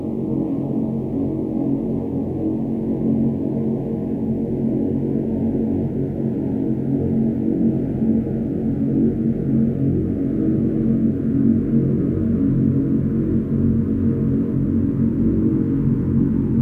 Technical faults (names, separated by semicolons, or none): none